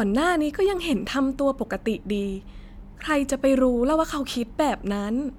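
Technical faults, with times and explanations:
No technical faults are audible anywhere in the speech.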